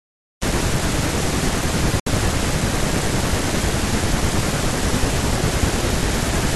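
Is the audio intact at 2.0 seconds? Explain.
No. A digital broadcast dropout runs from 2.00 to 2.07 s. The receiver stopped getting valid frames and muted until good ones returned. The speech fades out in about 3 ms and leaves a short silent hole. The missing 64 ms fits two lost frames.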